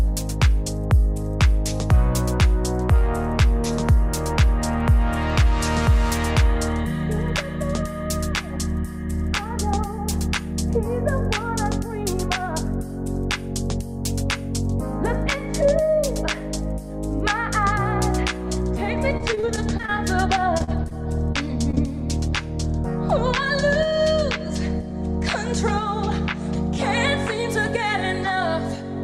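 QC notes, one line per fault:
19.17–21.79 s, repeated packet loss (robotic sound): audio packets went missing or arrived late again and again across this span, giving around twenty short holes, the longest about 38 ms. Each hole was patched by extending the sound just before it, about 311 ms of patched sound in all and roughly 12 percent of the span, while about 200 ms was simply lost. The rapid cycle of stretched and missing pieces makes the passage choppy, with pieces missing.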